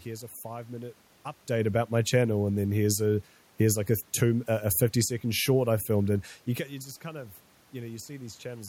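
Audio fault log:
No faults are present in this speech recording. Room background noise stays audible underneath, and the level shifts around 1 s and 6.5 s come from the talker moving relative to the microphone.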